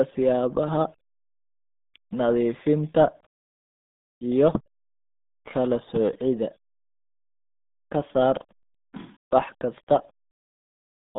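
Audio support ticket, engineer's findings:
RealAudio 14.4 codec, throughout. Speech confined to 150 Hz–3.7 kHz, nothing above 3.8 kHz. Heavy codec damage: muffled, gargly texture. Speech coder built for dial-up discards spectral detail at very low rate, which fits an 8 kbit/s RealAudio 1 stream.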